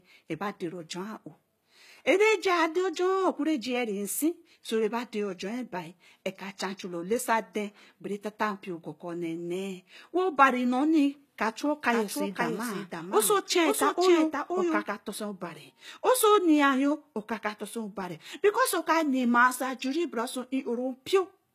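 Throughout, the speech has gritty, lispy s sounds and synthetic-sounding treble that stops at 14.9 kHz. This is likely HE-AAC compression at around 20 kbps, rebuilding the highs from copied lower bands. From 11.64 to 14.84 s, a second copy of the speech runs about half a second behind and a few dB quieter, appearing and disappearing abruptly. This is likely a doubled audio track with two unsynchronised copies mixed together.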